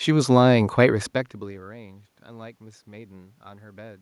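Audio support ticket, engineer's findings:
No system fault found in the speech signal: the steady background is room noise captured at the microphone, and the level shift around 1 s is the talker moving relative to the mic, not a gain or transmission issue.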